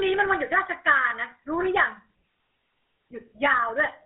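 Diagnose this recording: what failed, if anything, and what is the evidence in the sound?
Codec stage: the whole clip shows GSM full-rate codec damage, and it is plainly audible. The speech has a buzzy, gravelly roughness from the pulse-driven vocal-tract model, which fits a 13 kbit/s full-rate stream. The band runs from about 200 Hz to 3.5 kHz, with nothing above 3.8 kHz.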